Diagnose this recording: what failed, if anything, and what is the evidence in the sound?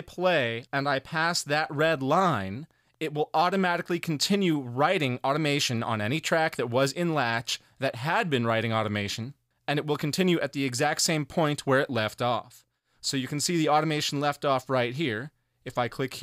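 Nothing failed at any stage of the chain: the recording holds steady throughout, with no dropouts, discontinuities, level jumps or spectral damage to point at.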